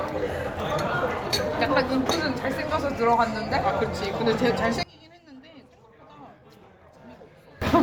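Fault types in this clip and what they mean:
Sudden gain jump: from 4.83 to 7.62 s the sound and background drop abruptly by about 22 dB, likely a gain change applied without a ramp.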